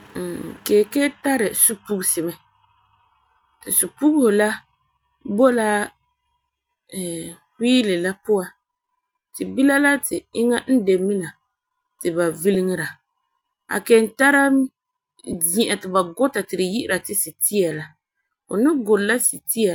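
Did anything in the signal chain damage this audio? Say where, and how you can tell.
Yes, at the Bluetooth LE Audio link. There are lost LE Audio frames at 1.19–1.21 s, just before "tari supugesi mɛ", at 12.54 s after "ti ba", and at 15.33 s before "zi'an ti ba guta". Each gap, about 10–20 ms, fits one or two 10 ms LC3 frames. The decoder fills it with a noisy smear rather than a click or hard silence. That smear is what sets it apart from a buffer dropout.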